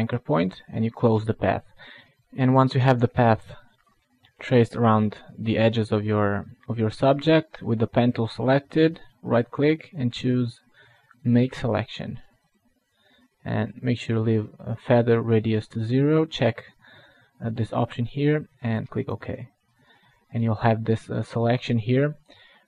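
Nothing in the audio stood out as a technical problem on listening.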